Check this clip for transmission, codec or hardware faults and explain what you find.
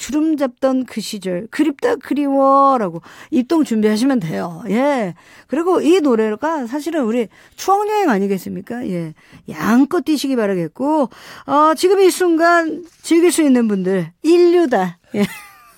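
Nothing in this speech recording points to a fault, as the signal stays continuous and stable throughout.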